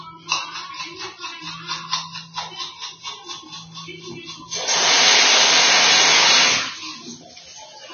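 Throughout, nothing sits above 6.5 kHz and the treble is hissy and grainy, likely from heavy Vorbis compression at a very low bitrate, coarsely quantising high-frequency detail into noise.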